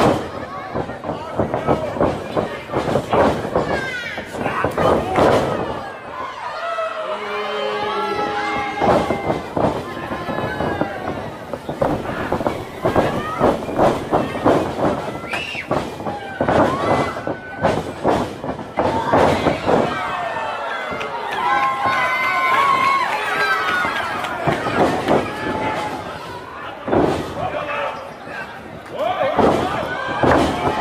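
From 11.78 s to 14.23 s a filter is restarted on every block, losing its state and starting each block from silence. Each restart adds a small transient, heard as a 100 Hz buzz that tracks the signal's level and points to blocks about 10 ms long.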